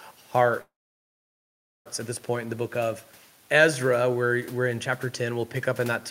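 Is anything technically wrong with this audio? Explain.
Yes. From 0.61 to 1.88 s the speech stops: the last sound trails off as a brief fading buzz, then about 1.16 s of near silence in which only the room noise, about 30 dB below the speech, can be heard. The speech resumes with "at this point in", with nothing lost. This is a call audio freeze, likely caused by delayed packets draining the jitter buffer, so the receiver filled roughly 1.24 s and the audio then ran that much later.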